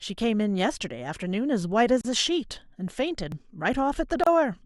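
It's a short speech clip with two kinds of trouble. At 0.75 s and again at 3.32 s the sound jumps ahead, skipping a slice of roughly 15 ms with no silence in between. That's likely a dropped buffer (overrun), where the samples got overwritten before the program collected them. Then there are two gaps at a join of encoded pieces: a 36 ms gap from 2.01 to 2.05 s and 29.5 ms from 4.24 to 4.27 s. The edges are smeared, and the sound resumes exactly where it stopped. That's the encoder's start-up delay and last-frame padding left in where separately encoded chunks were butted together without trimming.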